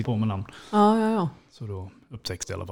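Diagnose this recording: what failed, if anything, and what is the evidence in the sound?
Two brief glitches cut through the speech, one at 0.04 s and another at 2.43 s. They point to damaged data in a compressed stream, a codec or storage fault. The decoder hits corrupted bytes, misreads those frames and loses sync until it finds a valid frame header.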